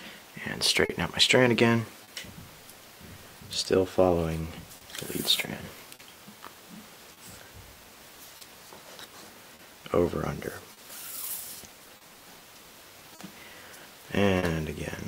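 Throughout the clip there is clock drift between sender and receiver. The sender's clock runs roughly 3% slow, so the receiver's jitter buffer keeps draining and the receiver has to pad the stream to keep playing. This shows up as small timing hiccups scattered unevenly across the whole 15 seconds. Unlike a single late packet, the cause never goes away. It sets the slightly dragging, unsteady pace that the later faults sit on.

At 0.85 to 0.92 s comes a short stall from a late packet. A packet missed its slot, the buffer ran dry, and the receiver held the last sound for 40 ms until the packet arrived, then carried on from the same point. Nothing is lost, and the playout delay grows by 40 ms. What you hear is a brief freeze with a faint buzz or dip, not a skip. A second identical stall falls at 2.04 to 2.11 s, also 40 ms, with nothing missing.

That second stall sits inside a run of repeated timing corrections from 1.99 to 4.43 s. 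Here the receiver plays at 98% speed, repeating small slivers to make up for the slow sender, about 50 ms in all. Each edit is tiny and irregularly spaced, and all of them go the same way, lengthening the sound. The result, if audible at all, is a slight wobble in tempo rather than a distinct held note like the stalls.

From 4.77 to 14.46 s there are scattered short gaps, roughly ten of them, each patched by continuing the preceding sound. Together they cover about 400 ms, around 4% of that stretch, and the longest is around 40 ms. Because the gaps are isolated late packets rather than a steady speed change, they come across as separate ticks and smears, not a general unsteadiness in tempo.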